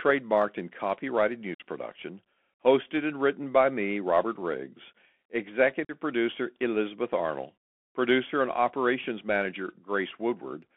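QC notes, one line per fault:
Throughout: Bluetooth CVSD headset codec. The speech sits in a narrow phone band, roughly 250 Hz to 3.4 kHz, with a grainy hiss underneath, scratchy s sounds and breakup on loud bright bits, as the one-bit slope tracking can't keep up, which fits a 64 kbps CVSD link.
1.55–1.61 s and 5.85–5.92 s: unconcealed Bluetooth headset packet loss. Two abrupt holes in the speech, about 52 ms and 45 ms of lost audio, each fitting a handful of dropped headset packets replaced by silence or an idle pattern, with a briefly quieter restart.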